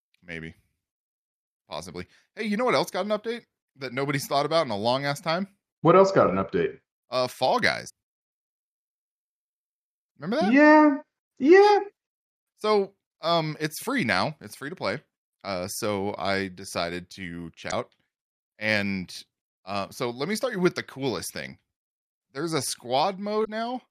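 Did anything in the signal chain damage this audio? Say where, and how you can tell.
Yes, damaged data in a compressed stream, at the codec stage: brief glitches at 7.86–7.90, 17.68–17.73 and 23.41–23.48 s where the decoder loses frame sync.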